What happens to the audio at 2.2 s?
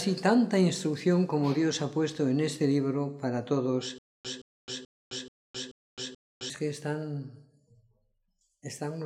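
Nothing goes wrong at 2.2 s; the audio plays through that moment intact, with no dropout, click or other fault.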